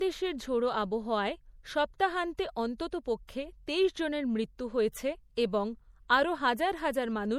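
From start to finish the speech carries the artefacts of a low-bitrate MP3, and nothing is present above 19.9 kHz. The fault is low-bitrate audio saved at a high bitrate. The likely cause is that a 64 kbit/s MP3 was re-encoded as a 256 kbit/s MP3. The larger second file cannot bring back detail the first pass discarded, so the original artefacts remain audible while the second encoding adds almost nothing.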